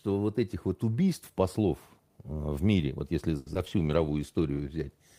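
From 3.37 to 3.84 s, right after "в мире вот если", repeated packet loss (robotic sound) leaves what sounds like four gaps, the longest 90 ms. About a third of the stretch is patched with repeated sound, which comes across as choppy. On a spectrogram this shows up as smeared, repeated frames, and the waveform shows dropouts.

From 3.78 s to the end, a call bitrate drop makes the sound rough and dulled, which fits a fall from about 32 to 17 kbps. On a spectrogram the high frequencies thin out or disappear.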